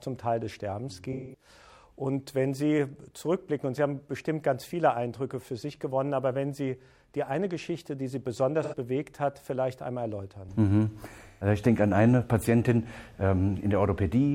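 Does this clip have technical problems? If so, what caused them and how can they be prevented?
Yes: AAC frame loss with concealment occurs three times, at 1.12–1.48 s, 8.63–8.75 s and 11.27–11.47 s. Each time, frames of the compressed stream went missing and the decoder covered the gap by extending the last good spectrum. That produces a smeared, noisy or phasey patch instead of the hard silence and edge clicks of a plain dropout. Adding forward error correction or retransmission on the delivery path would prevent these losses.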